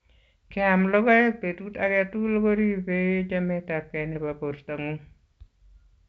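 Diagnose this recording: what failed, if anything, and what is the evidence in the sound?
Nothing failed in this recording.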